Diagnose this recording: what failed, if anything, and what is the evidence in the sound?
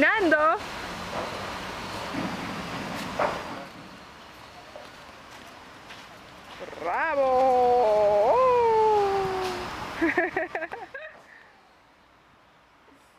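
A gain change was applied in coarse, unsmoothed steps at the driver or buffer stage, producing zipper noise from 6.69 to 7.38 s. The level moves in 2 dB jumps, about ten per second, for a total shift of roughly 10 dB. Each jump is an abrupt discontinuity in the waveform, so a fast ticking rides on the sound while the level is moving.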